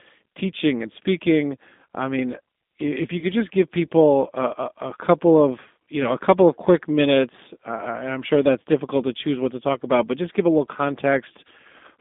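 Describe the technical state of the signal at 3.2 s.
At 3.2 s the signal shows VoIP packet loss concealed by the speech codec. The gap runs from 3.19 to 3.25 s, between "I mean if you" and "just give people a". About 30 ms of audio is missing, which fits three lost 10 ms frames. The decoder filled the hole by repeating its last pitch and filter settings at falling gain. The sound smears into a short buzzy tone or coloured noise that fades. It stays weak and rough for a moment after the stream returns.

Underneath this is the G.729 codec, present throughout the clip. The line passes only about 200 Hz to 3.6 kHz, so there is no top end. At 8 kbit/s the codec rebuilds speech from a vocal tract model, a pitch predictor and a few pulses per frame. The coding damage is plainly audible here. The speech sounds rough and slightly synthetic.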